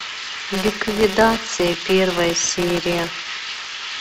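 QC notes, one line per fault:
throughout: filter restarted on every block, each block starting with a transient, giving a 188 Hz buzz that fits 256-sample blocks and follows the signal level, unlike steady hum.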